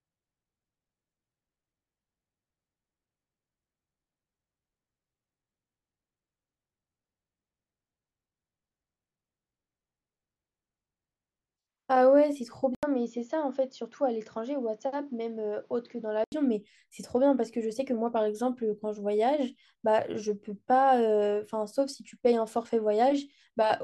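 At 12.75 s an 80 ms silence gives way to duller, boxier, slightly quieter speech over new background noise, lasting to 16.32 s. The input likely switched to a poorer device. A spectrogram shows nothing above 7 kHz there, and the waveform shows the gap and a smaller envelope.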